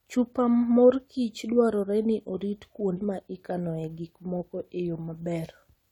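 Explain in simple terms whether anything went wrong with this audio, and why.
Some of the compressed data in this speech recording was damaged at about 2.96 s, just after "morkich dwarore ni orit". The decoder misread those bytes and had to hunt for the next good frame, so there is a brief glitch before "ma ikanoe gik moko".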